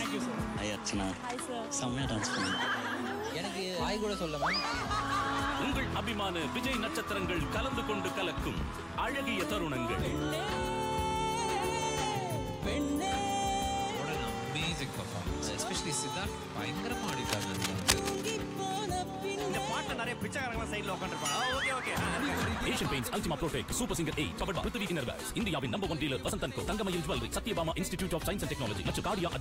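At 17.03 s there's a burst of cable scratch noise that runs until about 18.33 s, so a little over a second. It sits nearly as loud as the sound itself, a rough, uneven crackle and rustle laid right over the top. What's happening is likely a worn lead, connector or pot being nudged, so the contact resistance jumps around quickly and those jumps come through as dense, irregular noise until things settle again.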